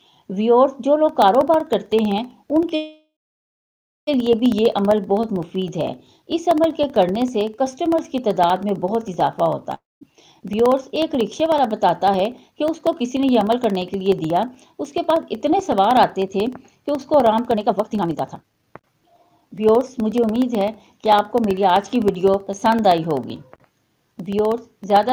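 Periodic USB or driver dropouts run from 1.09 s to the end, every 64 ms. A background task stalls the USB bus or audio driver at that fixed interval, and each stall drops a sliver of audio and leaves silence. The result is an even train of ticks, audible only while sound is present.

A call audio freeze at 2.75 to 4.09 s is heard as the last sound smeared into a fading buzz, then about 0.97 s of silence, before the audio resumes where it stopped. The likely cause is held-up packets draining the jitter buffer. Nothing is lost, but about 1.32 s of gap is inserted, pushing everything after it later.

A long network dropout at 9.74 to 10.13 s again stretches the last sound into a fading buzz, followed by about 0.2 s of silence. It resumes about 280 ms further on, skipping that stretch. The likely cause is a run of packets that never arrived.

A jitter buffer speed-up from 10.39 to 20.29 s follows. 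With surplus audio queued, the receiver repeatedly cuts short pitch-period slices, about one and a half seconds in total. Pitch stays the same, but the sound plays at 113 % speed and feels hurried.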